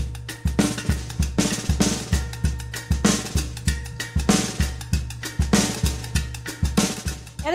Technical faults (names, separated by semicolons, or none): none